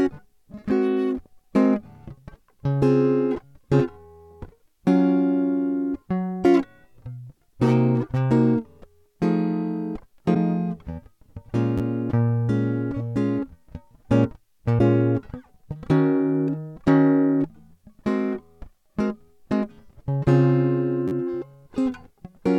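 At 10.33 s the music breaks into a garbled fragment about 30 ms long, and the same happens at 14.78 s. Each lasts roughly one 26.1 ms MP3 frame. The likely cause is a broken MP3 bit reservoir: after a cut in the stream, the next frame reaches back for borrowed bits and decodes bytes belonging to a different frame. The playback jumps forward and the first frame after the splice comes out corrupted.

At 11.78 s a repeated buffer appears. A 10.67 ms block plays three extra times over about 30 ms, which fits a 512-sample buffer. Because the block is so short, the hard joins fuse into a brief click or buzz rather than an audible stutter. The same fault returns at 21.08 s with four extra plays, lasting roughly 40 ms. In both cases the device ran dry and replayed its last buffer, so the repeats were inserted into the music without dropping anything.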